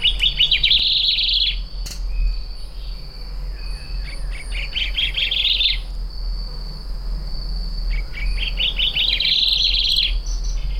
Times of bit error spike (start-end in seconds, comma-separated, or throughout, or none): none